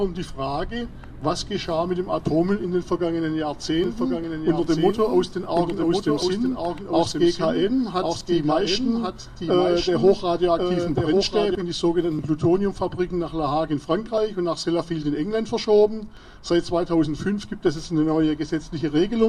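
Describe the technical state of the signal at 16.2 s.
At about 16.17 s there's an overlap between stream segments. Two adjacent chunks of the stream carry time stamps that overlap, so the player trims what it thinks is duplicated material. That material wasn't actually doubled, so roughly 5 ms of real audio is thrown away and the waveform jumps straight across the gap. The result is a tiny skip in the sound right at that point, and it fits segments about 2 s long.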